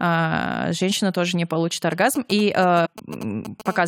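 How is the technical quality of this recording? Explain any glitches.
The recording has three glitches, all from outside interference or damaged data.

GSM signalling bursts, 1.92 to 3.62 s, starting just after "женщина тоже не получит": a 2G handset close to the recording chain was exchanging short control bursts with its network, and the audio circuitry rectified those radio pulses into sound. The result is a galloping dit-dit-dit of ticks and brief buzzes keyed at 217 Hz, sitting roughly 15 dB below the speech and running independently of it.

Compressed frames skipped, 2.85 to 2.87 s: several frames of the encoded stream, around five, were lost or rejected by the decoder as corrupt, so playback jumped ahead by about a tenth of a second of speech. The frames are 23.2 ms long. At the splice, a small piece of speech is missing.

GSM phone buzz, 3.66 to 3.83 s: a 2G handset in continuous call transmission was pulsing 217 times a second, and the circuitry again demodulated the bursts. 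The result is a hard, raspy, harmonic-rich buzz at 217 Hz, about 16 dB below the speech and unrelated to it, steady for its short duration near the end of the clip.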